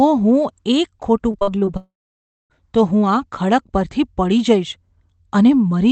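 From 1.31 to 1.69 s the speech turns choppy and robotic. This is repeated packet loss. Five short holes open up, the longest about 43 ms. Each is patched by stretching the previous sound, so roughly a third of this span is filler.

At 1.77 s the sound stops arriving for 0.75 s, until 2.52 s. The last sound carries on briefly as a fading buzz. Then about 0.6 s of silence follows. The likely cause is a long network dropout. Speech resumes with that stretch missing.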